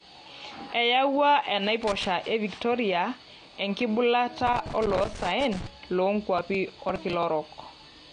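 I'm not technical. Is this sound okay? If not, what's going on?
No. The whole recording sounds dull and smeared, with nothing above about 9.8 kHz; that is likely AAC compression, squeezing the file small enough to cost clarity.

From 1.83 to 2.06 s and again from 4.47 to 5.67 s there are bursts of irregular scratchy crackle. This is loose connector crackle, a worn or dirty plug cutting the signal on and off.

From 6.38 to 7.23 s a gritty tearing rides on the speech. This is processor overload crackle: the computer fell behind and dropped about twenty tiny slices of sound, each roughly a hundredth of a second long.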